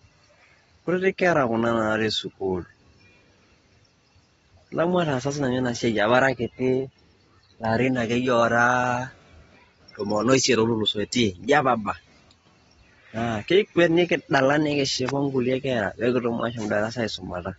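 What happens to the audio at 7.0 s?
At 7.0 s the speech carries the same damage heard across the whole clip: nothing above about 7.8 kHz, a dull, smeared tone and a warbling, fizzy texture on sibilants. This is likely AAC compression, consistent with AAC-LC at around 24 kbps.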